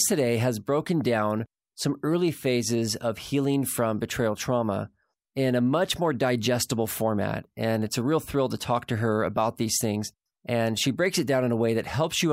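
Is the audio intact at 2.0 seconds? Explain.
No. A block size mismatch (truncated) runs throughout, chopping the end off each block, which fits 1024-sample writes. This makes a 46.9 Hz buzz, seen as evenly spaced vertical striping and waveform discontinuities, with speed unchanged.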